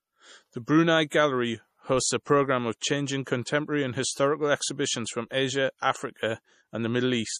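Throughout the speech the treble stops dead at 14.5 kHz, s sounds carry a swirly, metallic chirp, and the background has a watery texture. This is MP3 compression, likely at a low bitrate around 40 kbps. Short of bits, the encoder discards the top band and drops weak frequency lines that flicker in and out between frames. A plain low-pass filter would dull the sound without that shifting, bubbly quality.

At 1.10 s, an attack is preceded by about 18 ms of hiss and lands softened. That is pre-echo: the codec spread quantisation noise meant for the loud onset across its whole block, including the quiet instant before it. It happens again at 3.45 s, after "a programme of changing" and before "and historical exhibitions from", this time over about 19 ms. Unlike a click or a reverb tail, the noise comes before the sound that causes it.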